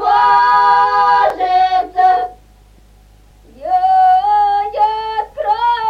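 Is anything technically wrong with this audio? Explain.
Yes. Overlapping chunks occur at 1.30, 3.31 and 5.32 s. Each 2-second chunk starts about 7 ms early, so that sliver replays, causing a regular click.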